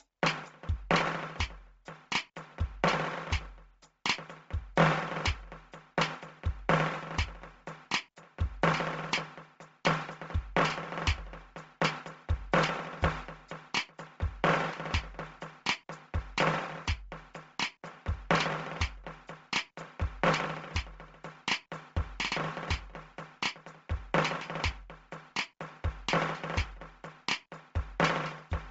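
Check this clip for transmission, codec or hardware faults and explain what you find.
One fault runs through the whole music clip, and it sounds like heavy Bluetooth LC3 compression. Start to finish, nothing gets above 7.7 kHz, and the upper part that survives has a grainy, hissy sheen. The likely cause is a low-rate transform codec that throws away most of the upper spectrum and fills the gaps with noise. That fits something around 24 kbps with 7.5 ms frames.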